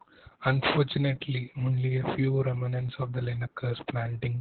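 From start to finish the speech carries Opus voice compression damage, and it's heavy. The band is cut to about 4 kHz, so it sounds muffled and phone-like, with a hoarse, slightly robotic grain, which fits SILK mode at something like 8 kbps.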